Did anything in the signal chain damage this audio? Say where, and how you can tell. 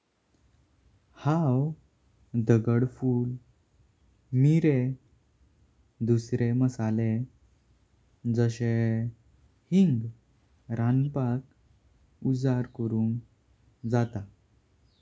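Yes: echo leak at 11.05 to 11.1 s in call processing. A very faint copy of the speech arrives 141 ms late, likely loudspeaker pickup that an echo canceller missed.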